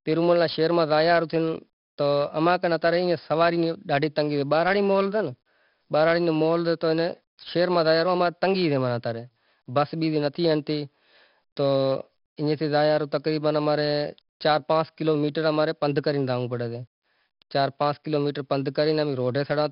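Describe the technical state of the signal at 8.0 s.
At 8.0 s the speech carries 4-bit ADPCM compression, present across the whole clip. Coarse predicted steps add gritty hiss that swells with loud syllables and smears attacks. On a spectrogram the noise floor tracks level and everything above 5.3 kHz is empty, which fits roughly 44 kbps.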